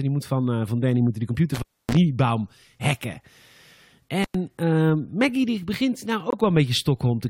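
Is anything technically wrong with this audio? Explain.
Yes, there are two kinds of fault in this speech clip.

An intermittent contact fault occurs twice, from 1.54 to 1.97 s and from 4.23 to 4.34 s. A loose plug or cable briefly breaks the signal path, and the line stays open for about 270 ms the first time and about 100 ms the second. The speech drops out with crackle at each edge where the contact scrapes, and faint hiss remains in the gap. That edge crackle and residual noise are how it differs from a digital mute.

A corrupt frame muted fault occurs from 6.30 to 6.35 s. Damaged compressed data was rejected by the decoder, and the player substituted silence. The hole is about 44 ms long, which fits a pair of codec frames. It starts abruptly and is truly silent, with no crackle or hiss. Timing is preserved, so the speech resumes on schedule, which separates it from a stall or skip.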